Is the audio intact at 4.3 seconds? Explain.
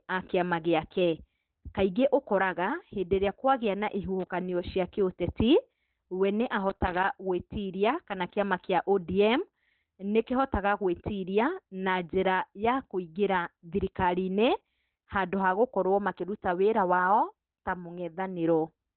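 No. Loose connector crackle runs from 4.20 to 4.30 s, ending right at that moment. A worn or dirty contact is rapidly making and breaking as it shifts, chopping the signal on and off, so roughly a tenth of a second of irregular scratchy crackle sits on top of the speech.

Throughout, the speech is muffled and hoarse, with nothing above 4.2 kHz. This is likely Opus compression at a very low rate, around 12 kbps, where the encoder falls back to its narrowband speech mode and discards the upper spectrum.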